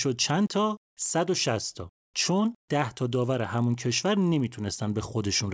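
A resampler restarted on every block runs through the whole clip. The converter processed each 20 ms block in isolation, with no memory of the samples on either side, so every block boundary picks up a small discontinuity. Repeating 50 times a second, these edges fuse into a buzz at 50 Hz riding on the speech and dropping away in pauses. The sound points to a rate change from 24 kHz down to 16 kHz.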